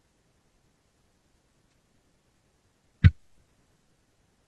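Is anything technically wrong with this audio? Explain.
Yes. From 1.64 to 1.73 s the speech has an AAC frame loss with concealment. The decoder bridges the 85 ms gap, which fits two lost frames, by reusing the last good spectrum, leaving a brief smeared, phasey patch rather than the clean silence of a plain dropout.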